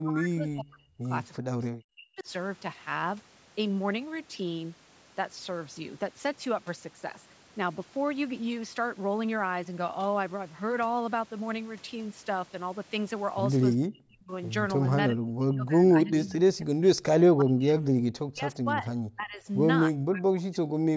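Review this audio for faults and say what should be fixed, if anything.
Speech suppressed in double talk: the talker's level falls by about 40 dB at 0.01–1.12, 1.38–2.28, 13.89–14.31, 15.09–17.72, 18.27–18.88, 19.15–19.47 (about 20 dB) and 20.04–20.9 s, likely from the echo canceller treating the talker's speech overlapping far-end speech as echo. Better double-talk detection in the canceller would prevent this.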